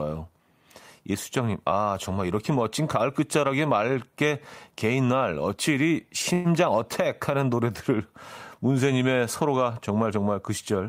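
From 6.33 to 6.47 s, call audio freeze: the last sound drones and fades, showing as flat spectrogram streaks. Likely a jitter-buffer underrun. Nothing is lost, and speech resumes 0.11 s late.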